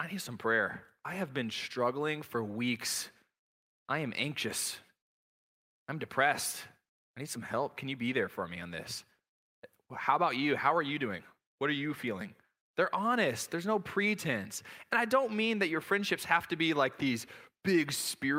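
No technical faults can be heard anywhere in the recording; the signal stays steady and intact over its whole duration.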